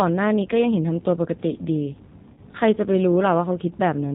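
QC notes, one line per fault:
throughout: G.729 codec. Nothing above 4 kHz. The sound is slightly rough and synthetic, as expected from rebuilt pulses, which points to 8 kbit/s G.729A.
2.33–2.40 s: VoIP packet loss concealed by the speech codec. About 40 ms went missing, which fits two lost packets. The decoder stretched the last sound and faded it out.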